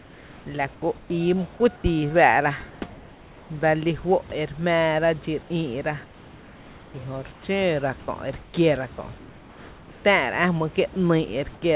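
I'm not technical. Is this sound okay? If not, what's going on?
No, not quite. It's speech, and in several quiet gaps the real room background gets swapped for a smooth, even hiss. That's comfort noise in place of the background, likely because the call stops sending audio when nobody is talking and the receiving end fills the gap with made-up noise. You can hear it from 0.0 to 1.1 s, briefly at 1.76 and 2.7 s, from 6.04 to 7.44 s just before "xǿǿ ra", from 8.0 to 8.54 s before "kiéra kö’", from 9.18 to 10.04 s right after it, and briefly at 11.54 s.

There's also one tiny spot at 10.94 s where a sliver of the speech itself vanishes, about a fiftieth of a second, and that same hiss takes its place. That's sound dropped by the voice detector: the part that decides whether someone is talking likely mistook that bit for background and stopped sending it, so you get a very brief blip before the sound picks up again.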